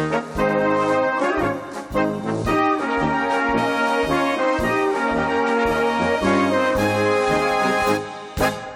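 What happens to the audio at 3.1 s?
Nothing goes wrong at 3.1 s; the audio plays through that moment intact, with no dropout, click, glitch or other fault.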